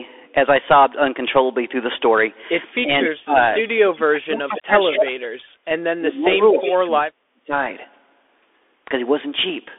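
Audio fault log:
throughout, Bluetooth CVSD headset codec: the speech is confined to a telephone band of about 300 Hz to 3.5 kHz, with nothing at all above 3.8 kHz, and the plainly audible granular hiss and scratchy sibilants fit one-bit CVSD coding at 64 kbps. Loud, bright passages outrun the adaptive step size and distort. A spectrogram shows a hard ceiling near 3.8 kHz, sibilants smeared into ragged noise below it, and a fine grainy noise floor filling the gaps between syllables.
2.73–3.09 s, 3.45–4.02 s, 4.45–4.61 s and 6.31–6.76 s, echo leak: a faint delayed copy of the speech comes back each time about 0.24 s after the original, most likely because a loudspeaker on the far side fed sound into its microphone and the echo canceller there did not remove all of it. The copy sits roughly 10 to 20 dB below the direct speech. A spectrogram shows fainter duplicates of the syllable patterns offset about 240 ms to the right, and the waveform shows small trailing bursts after the main ones.
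2.82–3.35 s, 4.07–5.43 s and 5.95–7.52 s, speech suppressed in double talk: the speech dips sharply or drops out in pieces, by around 25 dB in the first stretch and nearly 40 dB at worst. The pieces add up to about a fifth of a second in the first stretch and about a second in each of the others. The likely cause is an echo canceller that could not separate the talker from the overlapping loudspeaker echo and turned both down. The waveform's envelope collapses in chunks, and on a spectrogram the harmonics thin out or vanish in blocks.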